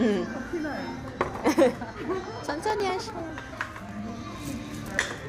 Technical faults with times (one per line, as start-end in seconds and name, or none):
2.60-5.18 periodic USB or driver dropouts